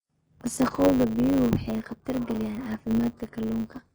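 From start to finish the speech carries heavy codec damage. The treble that remains sounds bright but synthetic, and the s sounds come out gritty and lispy, as if the top band were pasted on rather than captured. That points to HE-AAC compression, likely at a very low bitrate around 12 kbps, with spectral band replication regenerating the upper range from copies of lower bands. An ordinary lowpass codec would sound dull instead.

Also running the whole way through is a steady 100 Hz buzz, with the speech playing about 1.07 times too fast while its pitch stays near normal. This is a block size mismatch (truncated). One stage writes blocks longer than the next stage reads, which fits 512-sample blocks, so the tail of every block is discarded. The regular discontinuities form the buzz, and the missing slices shorten the timeline. A simple speed error would raise the pitch along with the tempo, and random dropouts would not repeat at a fixed rate.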